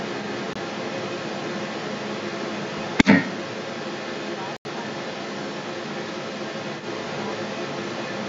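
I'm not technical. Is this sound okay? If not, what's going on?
No. Throughout the whole clip there's an echo leak: a second copy of the speech arrives about a quarter of a second late, and it's loud, even louder than the main voice. Most likely someone was on a speakerphone and their echo canceller let their own loudspeaker's sound back into the call.

There are also two blocks of digital silence, where the sound suddenly drops to nothing and snaps back. The first is a very short hole at 0.53 s, about 21 ms long. The second is a more noticeable hole from 4.57 to 4.65 s.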